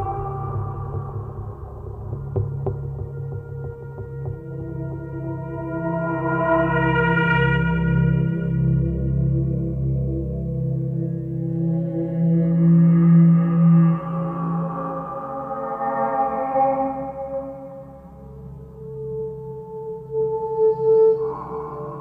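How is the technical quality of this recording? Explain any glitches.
No glitches turn up anywhere in this recording. There is nothing to explain.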